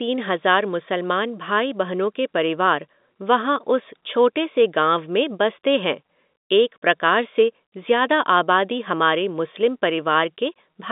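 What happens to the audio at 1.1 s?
Nothing goes wrong at 1.1 s: the speech carries on intact through that moment, with only the narrow telephone-band sound of G.711 coding that runs through the whole clip.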